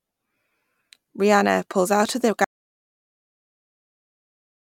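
At 2.45 s the input feed was likely lost, through a disconnected device, a failed link or a mute, while recording carried on writing silence. This audio dropout to silence cuts the speech off mid-flow, leaving dead, room-tone-free silence through to the end.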